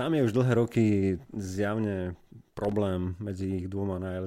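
At 2.64 s, right after "už dlhé roky zjavne", the speech is broken by a burst of loose connector crackle that lasts until 2.72 s, about 80 ms. A worn or dirty contact in the cable path is making and breaking as it shifts, so the signal is chopped on and off in quick, uneven steps. It sounds like a short scratchy rattle. It differs from digital dropouts or clicks because its timing is irregular rather than a single clean gap or evenly spaced ticks.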